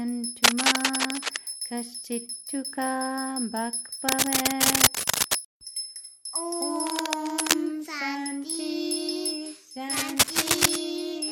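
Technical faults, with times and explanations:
0.44–1.41 s, 4.03–5.39 s, 6.76–7.54 s and 9.89–10.76 s: cable scratch noise. Four bursts of dense, ragged scratching and rustling sit over the sound. Most are a little louder than the sound itself, and the one at 6.76 s is roughly level with it. The likely cause is a worn cable or connector being moved, so its contact resistance flickers. On a spectrogram each burst shows as a broadband smear of irregular vertical streaks. On the waveform it looks like fuzzy, uneven spikes.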